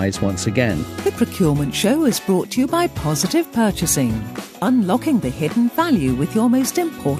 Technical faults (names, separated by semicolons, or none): none